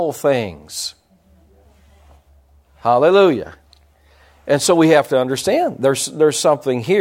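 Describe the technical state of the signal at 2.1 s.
At 2.1 s the speech signal is intact, with no technical fault present at that moment.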